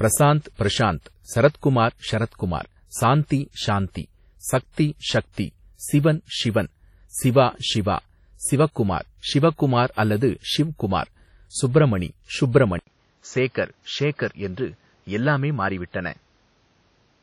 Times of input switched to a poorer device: 12.79-17.23

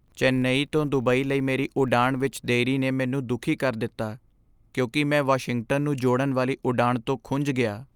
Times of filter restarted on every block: 0.00-2.53

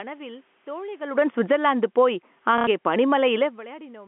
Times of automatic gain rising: 1.58-3.68

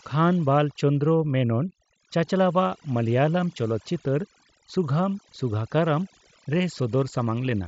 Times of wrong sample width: none

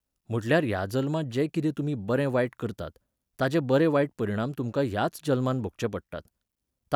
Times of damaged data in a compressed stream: none

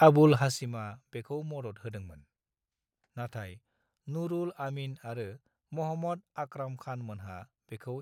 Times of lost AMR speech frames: none

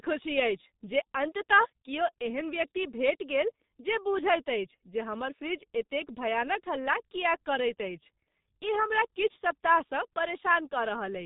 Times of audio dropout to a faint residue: none

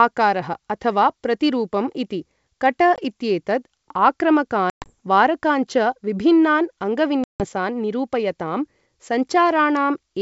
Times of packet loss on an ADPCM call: 2.96-2.99, 4.70-4.93, 7.24-7.45

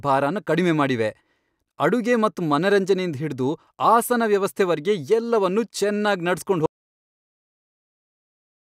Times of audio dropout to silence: 6.66-8.71

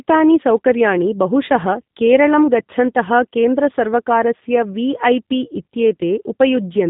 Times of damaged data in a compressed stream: none

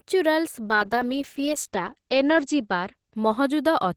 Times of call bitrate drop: 0.65-3.96

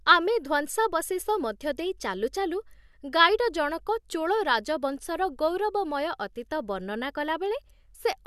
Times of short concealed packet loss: none

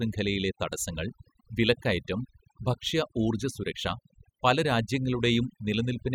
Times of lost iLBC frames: none

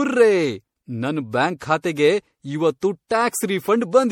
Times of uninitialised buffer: none

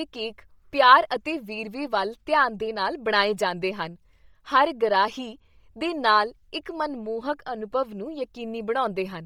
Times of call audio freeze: none

